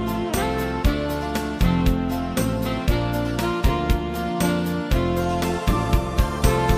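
No technical faults can be heard anywhere in this audio. Nothing in the signal calls for a fix.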